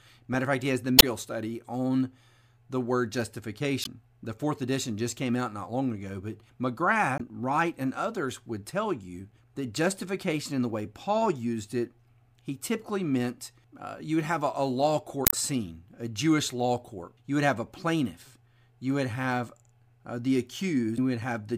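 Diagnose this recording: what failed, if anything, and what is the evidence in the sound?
Damaged data in a compressed stream, codec stage: the decoder loses frame sync and searches for the next frame header, giving brief disruptions in the speech at 0.96–1.04, 3.81–3.87, 7.17–7.21, 15.24–15.34 and 20.94–20.98 s.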